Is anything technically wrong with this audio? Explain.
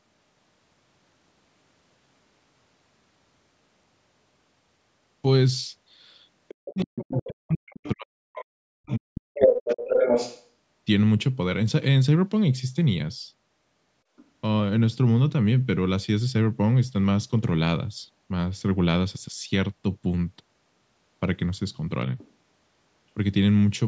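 Yes. From 6.48 to 10.46 s the other side's voice is leaking through at roughly the same level as the speech, most likely because the echo canceller did not fully remove a loudspeaker signal from the microphone. Shorter, much fainter scraps, about 30 dB below the speech, appear at 14.17 to 14.25 s and 22.18 to 22.31 s. On a spectrogram, the leak shows up as a second set of harmonic stripes overlapping the main talker's. The brief scraps look like faint isolated patches.

Speech is also suppressed in double talk, twice during that leak: from 6.53 to 8.23 s, covering about a second and a half, and from 8.87 to 10.11 s, about a second. With both sides active, the canceller likely pulled everything down rather than separating the talker from the echo, with dips as deep as roughly 40 dB. The talker's voice drops out in pieces. The waveform shows the envelope collapsing to near silence in chunks, and the spectrogram shows vertical gaps cut through the speech energy.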